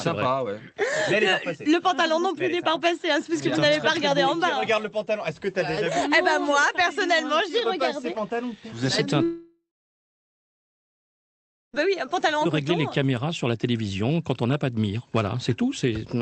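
A long network dropout, likely from lost packets, runs from 9.23 to 11.75 s. The audio smears into a fading buzz, then holds about 2.1 s of near-silence before resuming past the missing stretch.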